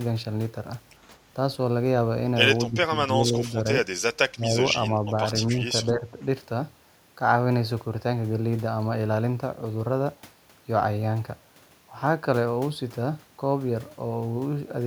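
At 2.68–3.56, 4.34–4.56 and 5.85–6.13 s the speech dips by up to about 10 dB, likely speech suppressed in double talk. These appear as notches in the waveform envelope and fainter spectrogram bands.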